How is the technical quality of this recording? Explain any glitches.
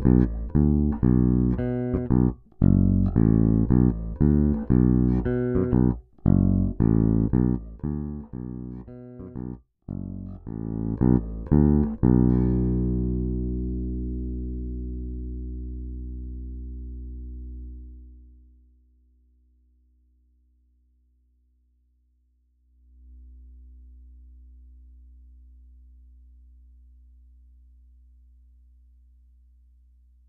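The recording is technically sound, with no glitches, dropouts or distortion to be heard anywhere in the signal.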